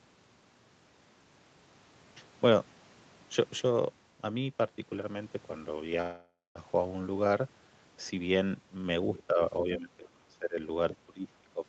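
At 6.01 s the speech stalls and the last sound is drawn out into a fading buzz that thins into about 0.23 s of silence before the talker resumes at 6.58 s. This is a call audio freeze, likely caused by packets held up in transit so the jitter buffer ran dry. The receiver filled the wait with a stretched tail of the previous sound. Since nothing was dropped, the speech picks up where it stopped, about 0.54 s later than it would have.

From 9.16 to 9.23 s a faint second voice, roughly 20 dB under the talker, slips in. More scraps follow at 10.04–10.08 s and 10.91–10.97 s, quieter at around 25 dB down. This is the other side's voice leaking through, likely from the far end playing on the talker's loudspeaker and being picked up by the microphone without the echo canceller fully removing it.

Around those scraps, the talker's own voice sags and breaks up from 9.27 to 10.58 s and again from 11.06 to 11.65 s, dipping by as much as about 20 dB. 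This is speech suppressed in double talk. With both parties speaking at once, the echo canceller likely could not tell the near voice from the loudspeaker echo and pulled both down together. Throughout, the sound is band-limited to 8 kHz, which fits the Opus call path.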